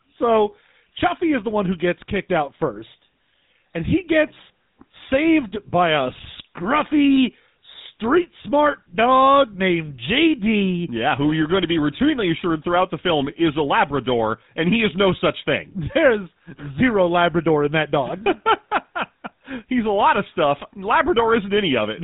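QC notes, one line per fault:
Throughout, GSM full-rate codec: the speech has a plainly audible buzzy, gravelly roughness and a dull top with nothing above 3.8 kHz, which fits the 13 kbps GSM full-rate coder, whose coarse pulse excitation through a vocal-tract model leaves that grainy texture.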